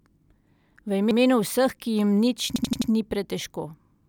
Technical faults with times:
1.11-1.19 repeated buffer
2.56-2.90 repeated buffer

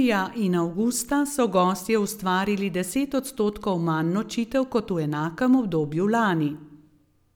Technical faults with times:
none

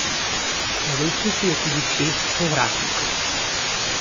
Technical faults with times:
0.00-4.00 low bit depth with dither
0.00-4.00 low-bitrate audio saved at a high bitrate
0.60-1.11 CD scratch ticks

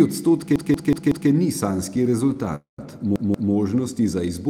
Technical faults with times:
0.56-1.30 repeated buffer
2.04-2.37 repeated stalls (stutter)
2.55-2.80 call audio freeze
3.16-3.53 repeated buffer

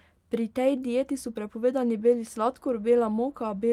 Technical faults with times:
none

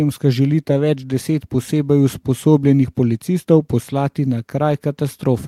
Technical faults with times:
none

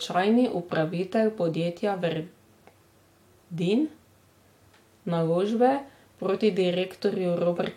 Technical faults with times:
none

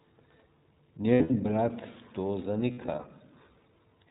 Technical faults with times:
0.00-4.10 iLBC codec
1.14-1.31 lost iLBC frames
2.72-3.05 lost iLBC frames

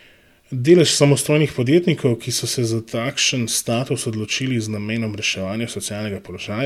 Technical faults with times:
none

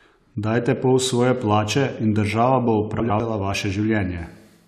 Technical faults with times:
3.00-3.20 chunks out of order

